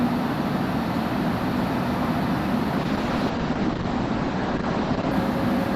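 From 2.78 s to 5.19 s the sound turns rough and watery and loses its top end, dulling above about 8 kHz where it had reached 20 kHz, and it stays at its coarsest for about 2.3 s. This is a call bitrate drop: the connection's bandwidth estimate fell, so the encoder had to work with far fewer bits. The quality points to a fall from around 64 kbps to roughly 10 kbps, where Opus codes coarsely and trims the high frequencies.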